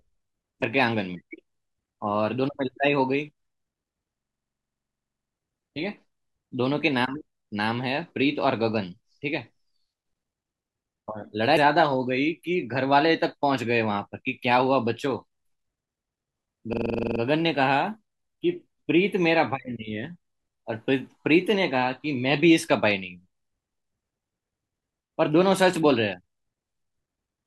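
At 0.59 to 0.63 s the speech breaks up briefly, a sign of damaged data in a compressed stream. Corrupted bytes made the decoder misread the frames there and lose sync until it found a valid frame header. On a spectrogram this shows as a thin broadband vertical smear. The same fault recurs as a brief glitch at 11.56 s.

From 4.19 to 5.34 s a system hang loop takes over. The audio driver stalled while the hardware kept replaying one 42.67 ms block, which fits a 2048-sample buffer. That block repeats 27 times at 23.4 Hz and produces a rapid machine-gun stutter. The waveform shows identical blocks tiled end to end, and the spectrogram shows evenly spaced vertical striations about 43 ms apart. A second loop of 11 repeats runs from 16.73 to 17.20 s. In both cases the speech resumes with essentially nothing skipped.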